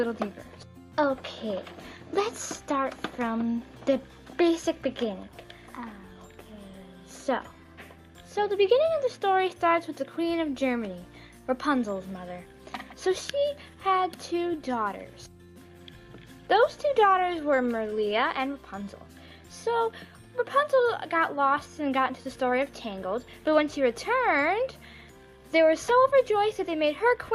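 Nothing in this one trips any alarm; it just runs along from beginning to end without a single glitch to point at.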